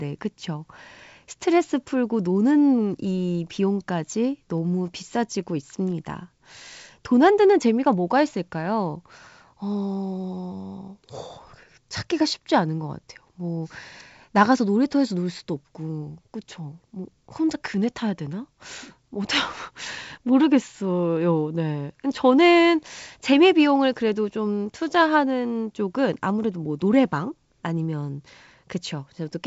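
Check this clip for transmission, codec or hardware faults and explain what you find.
I find no faults in this clip.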